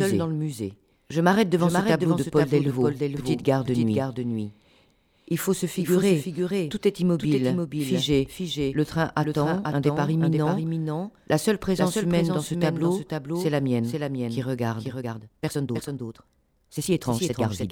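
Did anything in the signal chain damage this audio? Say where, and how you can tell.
Yes. A doubled audio track runs throughout: a clean copy about 5 dB quieter trails roughly half a second behind, most likely a second, slower capture path mixed back in.

From 14.9 s to the end, a time-stretched section sounds rushed at 1.55 times speed with unchanged pitch, likely editing software squeezing that passage to fit.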